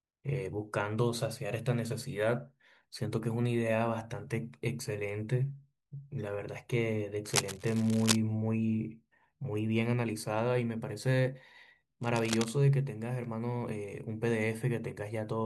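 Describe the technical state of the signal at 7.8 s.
Likely a worn cable or connector being moved, its contact resistance flickering: cable scratch noise from 7.25 to 8.16 s, ragged scratching nearly as loud as the speech.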